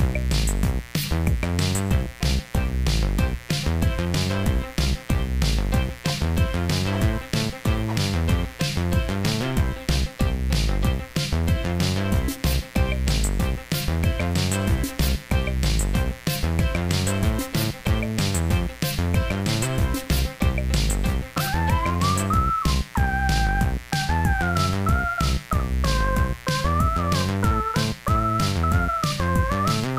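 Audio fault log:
Throughout, mains buzz: switching spikes from a 60 Hz supply are leaking into the signal path, most plausibly through a dimmer, rectifier or poor shielding, firing twice per cycle. Their harmonics stack up into a steady, raspy buzz running at roughly 20 dB below the wanted sound.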